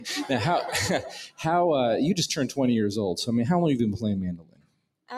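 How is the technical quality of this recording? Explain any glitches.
The technical quality is compromised by a noise suppressor designed for speech that stays active throughout the recording. It mistakes steady tones, ambience and reverb for background noise and keeps pulling them down. Onsets mostly slip through, but sustained parts and decays are reduced, so the level swings by about 15 dB over the course of the clip. The result is audible pumping and a thinned, unsteady sound.

Two passages are hit harder by this same noise suppressor. From 1.05 to 1.45 s, the processor classifies the sound as noise and cuts it by up to about 18 dB, so the sound sinks for that stretch. From 4.32 to 5.1 s, it happens again, more deeply, with a drop of about 20 dB.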